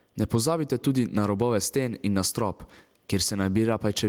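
Speech with gain pumping throughout: the level ducks under every loud sound, a swing of roughly 10 dB, leaving loud and soft parts closer in level and the sound squashed. The likely cause is excessive input gain driving a fast limiter.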